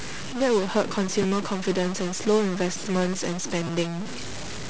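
Throughout the speech there is distortion, and the pauses fill with noise, most likely from a stuck bit holding one data bit fixed. At 1.22 s and 3.67 s, audio arrived late, so the device replayed a repeated buffer of 8 ms, which fits a 128-sample buffer. It played once extra at 1.22 s and twice at 3.67 s, each time with a hard join at the repeat.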